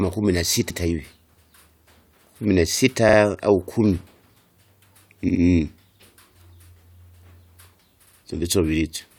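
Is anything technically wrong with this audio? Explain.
Yes. The speech has repeated frames at 0.69, 3.08, 5.28 and 8.05 s. A short run of compressed frames was decoded again. So a slice of about 85, 43, 64 and 64 ms plays twice or three times. Each one is heard as a brief stutter.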